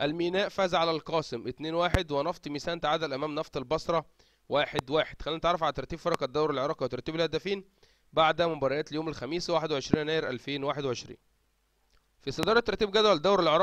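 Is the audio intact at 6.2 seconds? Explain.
No, not cleanly. A loud pop sits from 6.14 to 6.17 s, ending just before 6.2 s. A single sharp pop, about 20 dB above the surrounding level, is heard on top of the sound, which continues underneath. It is likely caused by a brief voltage step or pulse, such as a switch, static or a driver glitch, entering the signal path. On a waveform it shows as a tall, narrow spike; on a spectrogram, as a thin vertical broadband stripe.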